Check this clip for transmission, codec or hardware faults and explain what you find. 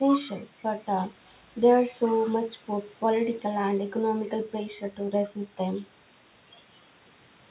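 No transmission, codec or hardware fault turns up in the speech: the spectrum stops at 4 kHz, the narrowband ceiling expected of a telephone-grade call codec and consistent with G.711 A-law at 64 kbps, and the thinned lowest bass left by the call's microphone processing is normal behaviour.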